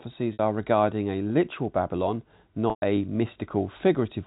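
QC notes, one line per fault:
0.33 s and 2.70 s, packet loss with pitch repetition: a brief buzzy hold at 0.33 s (60 ms), and at 2.70 s a 120 ms hold that fades to silence before the sound cross-fades back. The receiver loops the last pitch period to cover the missing packets, which fits about two and four 30 ms packets.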